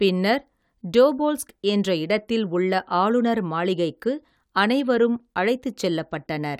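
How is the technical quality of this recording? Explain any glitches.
No technical glitches can be heard anywhere in the recording, so there is nothing to explain.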